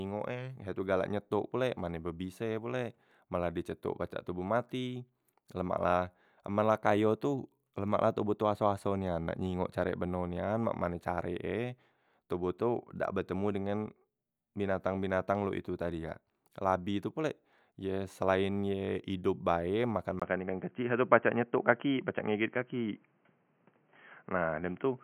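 Input switched to a poorer device at 20.2 s in this speech recording, and the remainder, to the end, sounds dull and boxy. A gap of about 20 ms marks the change. After it nothing remains above 3.2 kHz, the level shifts by a few decibels, and a new, faint background noise appears well below the signal. This likely comes from the system switching to another microphone or a headset's narrowband call profile.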